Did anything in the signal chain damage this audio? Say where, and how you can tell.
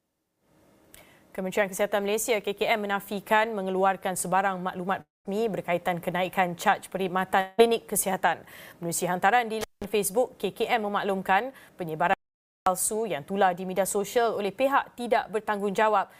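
Yes. Long network dropout at 5.01 to 5.27 s and 7.41 to 7.60 s: the sound smears into a fading buzz or hiss, then at 5 s falls to about 180 ms of silence. Likely packet loss concealed by the receiver; roughly 240 ms and 180 ms never arrived.

Intermittent contact at 9.61 to 9.85 s, in the analogue wiring: crackle marks both edges of a cut lasting about 178 ms, with faint hiss underneath. A loose plug or cable opened briefly, then reconnected.

Audio dropout to silence at 12.14 to 12.66 s: about 530 ms of silence with no room tone, and the sound stops and resumes mid-flow. This is likely a lost input at the capture stage while the recorder kept writing silence.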